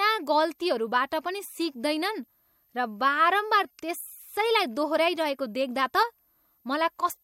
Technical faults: switching supply whistle

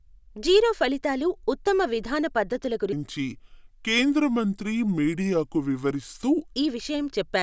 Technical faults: wrong sample rate

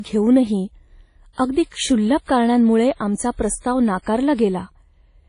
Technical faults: WMA compression

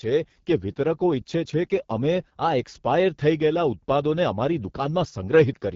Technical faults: AMR wideband (HD Voice) codec

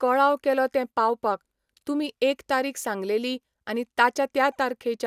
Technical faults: generation loss

